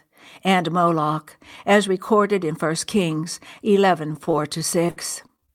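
From 4.13 s to 5.50 s, near the end of the speech, there is repeated packet loss with a robotic sound. Around a dozen short holes land one after another. The longest lasts about 58 ms. Each hole is covered by stretching the last bit of sound, so about 16% of that stretch is patched rather than real. The concealment repeats and smears. The speech turns choppy, with small pieces simply gone.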